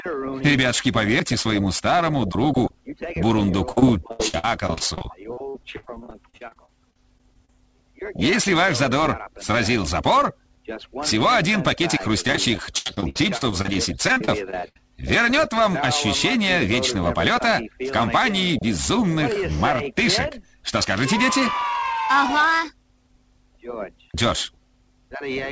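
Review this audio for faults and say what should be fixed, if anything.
Repeated packet loss (robotic sound) occurs from 3.72 to 7.59 s and again from 12.27 to 14.76 s. In each stretch, packets go missing in quick succession, and every hole is patched by stretching the preceding sound. The gaps run up to 77 ms and 73 ms, and about 24% and 22% of the two stretches is concealment, so the audio turns choppy, with pieces dropping out. Fixing this means stabilising the network path with less congestion, a larger jitter buffer, or forward error correction.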